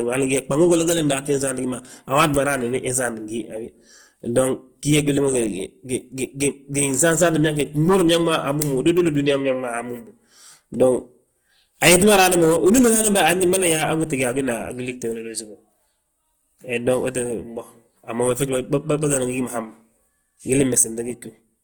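Opus compression damage runs through the whole of this speech recording, and it is plainly audible. The voice has a rough, grainy texture, with tonal parts turned noisy rather than swirling or hollowed out. Bandwidth stays fullband, reaching about 20.2 kHz. This points to an Opus encoder in its music (CELT) mode, likely running at a low bitrate around 24 kbps, keeping each band's energy but filling starved bands with folded or noise content.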